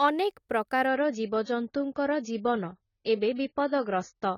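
From 0.87 s to the end, the speech abruptly turns dull and swirly, with nothing above 7 kHz and no gap: an adaptive stream switching to a lower bitrate.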